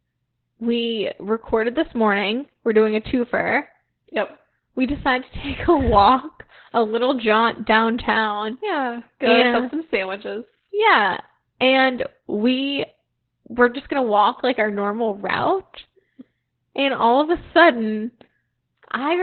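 Opus voice compression runs throughout: nothing above 4.3 kHz survives, and coarse coding leaves the speech muffled, hoarse and robotic, which fits narrowband SILK at 8 kbps.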